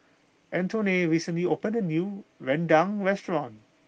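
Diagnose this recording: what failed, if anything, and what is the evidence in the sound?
Nothing failed in this recording, and the sound carries no evidence of anything going wrong; the speech comes through an ordinary call path.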